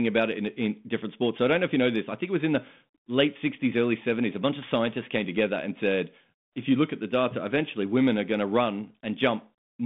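No technical faults are audible.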